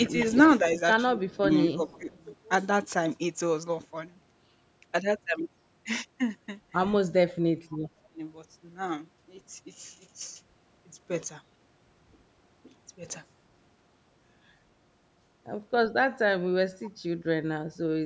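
From 1.13 to 2.1 s and 7.11 to 8.19 s, the speech dips by about 10 dB and then about 25 dB, each time for about half a second in total. This is likely speech suppressed in double talk, where the echo canceller turned the talker down along with the echo. Echo leak is likely at 1.29–1.37, 1.69–2.19, 7.71–7.78 and 16.84–16.9 s: faint scraps of the voice return 235 ms late, roughly 25 to 30 dB below the speech.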